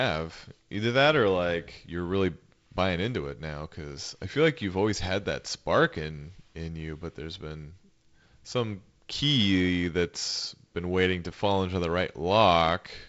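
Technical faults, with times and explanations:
Nothing stood out on listening to this wideband telephone speech.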